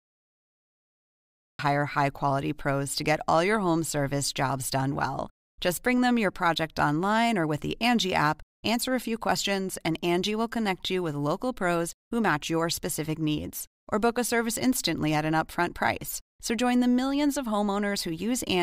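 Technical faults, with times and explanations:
0.00–1.59 s, cut-off start: digital silence, then the speech enters abruptly at 1.59 s mid-sound before "high quality pros to", with no natural attack, because capture began late.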